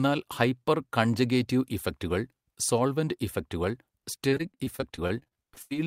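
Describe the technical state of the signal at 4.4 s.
Repeated packet loss (robotic sound) runs from 4.29 to 5.72 s, just after "കൺജഗേറ്റീവ് ഇഫക്റ്റുകൾ സോൾവെന്റ് ഇഫക്റ്റുകൾ". Fifteen gaps are patched by stretching prior sound. Speech turns choppy and robotic.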